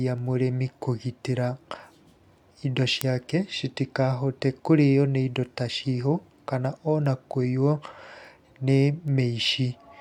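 A digital link carrying this speech is being read by a device running on its own clock, not locked to the sender, with the two drifting apart by something on the order of fifty parts per million. Each time the clocks slip past each other, a single sample is dropped or repeated. From 0.18 s to 9.89 s this produces word clock ticks, about thirty sharp ticks of uneven strength arriving at a steady rate of roughly one every 0.4 s.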